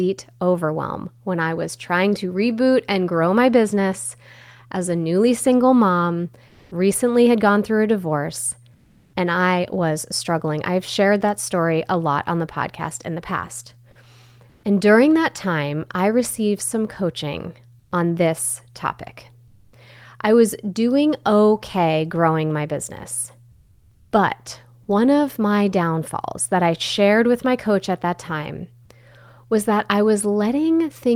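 Comfort noise in place of the background occurs at 6.47, 8.75, 14.51, 17.79, 19.47 and 23.51 s. Each pause lasts 0.12 to 0.6 s. The real background becomes a steady, smoother noise, about 1 to 9 dB quieter. The likely cause is Opus discontinuous transmission.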